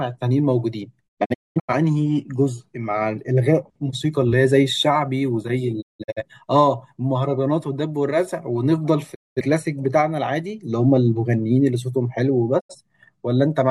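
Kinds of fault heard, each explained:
Digital broadcast dropout: the receiver stopped getting usable digital frames and muted the output until clean ones arrived again, so whatever was sent in those gaps is simply gone. The speech fades to silence over about 20 ms four times, near 1.1 to 1.7 s, 5.8 to 6.2 s, 9.1 to 9.4 s and 12.6 to 12.8 s. The first two break into several short holes, the longest about 0.2 s. On a waveform these are flat silent stretches with short tapered edges. A spectrogram shows clean vertical blank bands across every frequency.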